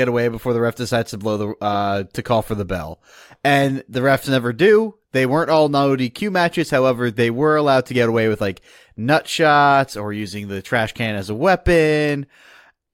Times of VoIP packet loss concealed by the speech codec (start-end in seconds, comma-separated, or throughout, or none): none